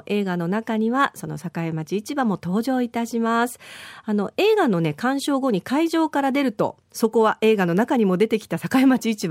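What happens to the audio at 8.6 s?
At 8.6 s the speech runs on intact, with no dropout, click, distortion or other fault.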